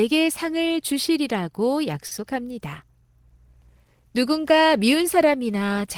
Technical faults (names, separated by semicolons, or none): short stall from a late packet